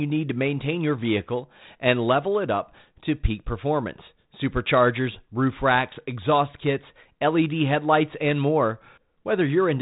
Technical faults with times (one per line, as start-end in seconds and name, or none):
none